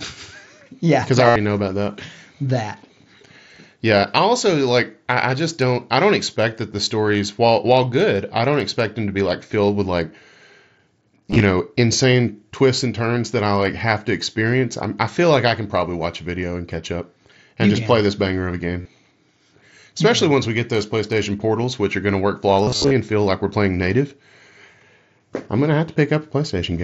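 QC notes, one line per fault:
1.26–1.36 s, concealed Bluetooth headset packet loss: about 90 ms before "know about that" refilled by repeating a recent stretch of waveform, heard as a buzzy tone at full level, seen as identical repeating cycles and flat stripes on the spectrogram.
11.27–11.41 s, same: 67.5 ms of short gaps over 135 ms, longest 15 ms, before "know insane twists and"; nearly hidden.
18.81–18.86 s, same: 37.5 ms, brief buzz.
22.64–22.91 s, same: 187.5 ms over 270 ms, longest run 60 ms, between "are going to work" and "and feel like we're"; warbles where real audio returns.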